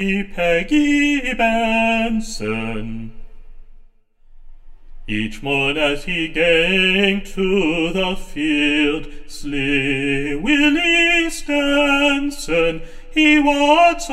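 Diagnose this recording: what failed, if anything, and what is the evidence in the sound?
What failed is channel delay (comb filtering), and it runs through the whole clip. One channel arrives roughly 10 ms behind the other, and when the two are folded to mono, anything they share cancels at regularly spaced frequencies, starting around 50 Hz and repeating up the spectrum. That's why the sound has that fixed hollow, phasey colour from start to finish. A lag that size points to a driver or buffer offset on one channel rather than a wiring fault.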